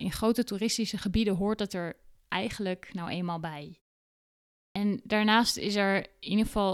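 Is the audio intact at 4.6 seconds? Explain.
No. At 4.62 s there's a clipped start after a pause. The speech picks up after a silence of about 0.9 s, but the output device has dozed off during that gap and needs a moment to wake and lock again. The first 135 ms, up to 4.76 s, never comes out. The speech just snaps in out of nothing, with its opening sounds chopped off.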